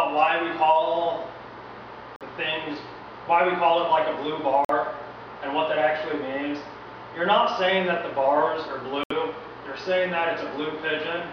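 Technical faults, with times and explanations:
2.16–2.23 s, 4.65–4.71 s, 9.03–9.11 s: Bluetooth dropout. The audio cuts to silence three times, for roughly 60 ms, 60 ms and 80 ms, then resumes further along, as though it kept playing through the hole. The skipped stretch fits two, two and three lost wireless audio frames, likely from packets arriving too late to play. A stall or buffer underrun would instead pause and pick up where it stopped, losing nothing.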